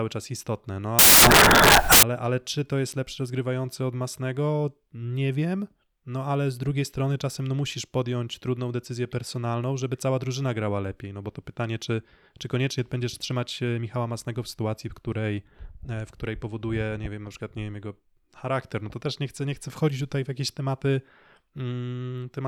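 From 0.99 to 2.03 s, just before "ale czy to jest", the speech turns into broadband noise because of samples built from the wrong bytes. The reader assembles each sample's bytes wrongly (off by one, reversed, or misaligned), so the rapidly changing low bits end up carrying most of each value. Unlike clipping or distortion, the speech isn't roughened but replaced. The noise starts and stops abruptly at the span's edges, matching the bad byte alignment.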